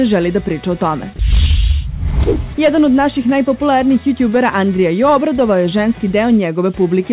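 A voice detector likely judged the signal to be background and stopped sending, so from 1.16 to 1.19 s about 30 ms of sound is replaced by steady comfort noise before the signal resumes. The audio reaches the listener through a telephone-style call path, with nothing above 4 kHz, which fits a narrowband codec.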